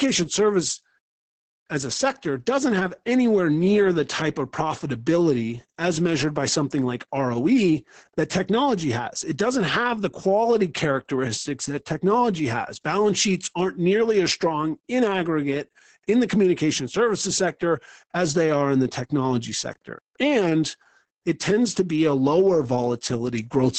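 Opus voice compression runs through the whole clip. The speech sits in a band cut off near 8.7 kHz, and SILK's linear-prediction coder, starved of bits, renders the excitation coarsely. This leaves a muffled, hoarse, faintly robotic tone that points to a bitrate around 10 kbps.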